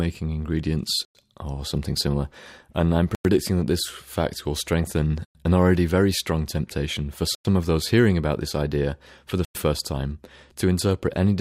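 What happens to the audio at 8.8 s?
Nothing goes wrong at 8.8 s; the audio runs on intact through that moment with no audible fault.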